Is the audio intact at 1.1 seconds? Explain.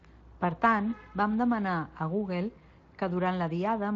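Yes, the audio is intact at 1.1 seconds, with no fault at that moment.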